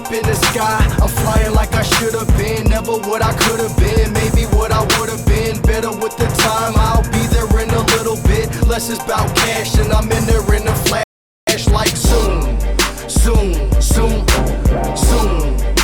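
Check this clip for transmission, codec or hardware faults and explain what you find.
One transmission fault is present, a rebuffering stall. It starts at 11.03 s and ends at 11.47 s. The player used up its downloaded audio and had to wait for more data to arrive. During that wait, the sound drops abruptly to silence for 0.44 s. Playback then picks up at exactly the point where it halted. No audio is skipped or repeated. The gap simply inserts 0.44 s of dead air into the timeline.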